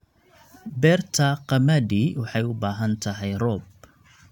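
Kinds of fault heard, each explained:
No technical faults detected.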